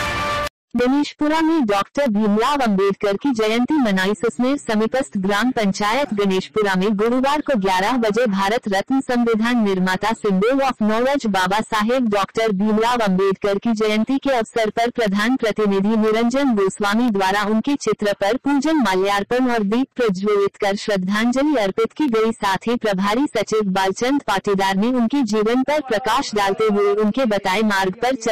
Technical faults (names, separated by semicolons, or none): periodic USB or driver dropouts